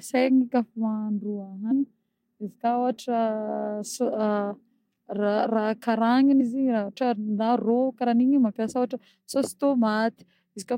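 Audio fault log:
1.70 s, 4.50 s and 6.40 s, compressed frames skipped: whole frames of the compressed stream either never reached the decoder or were rejected as damaged, so playback jumps straight past them, losing roughly 150 ms, 70 ms and 100 ms of speech. Each gap is a few frames long. Each jump sounds like an abrupt skip forward.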